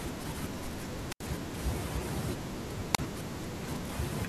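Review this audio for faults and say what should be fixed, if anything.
Hiss briefly swells and the speech drops into near silence from 1.08 to 1.24 s (about an 80 ms hole) and from 2.93 to 2.98 s (about 34 ms). This is a wireless microphone squelch dropout: the radio signal fades until the receiver's squelch mutes the output. To prevent it, improve reception with better antenna placement, a clear line of sight and a cleaner frequency.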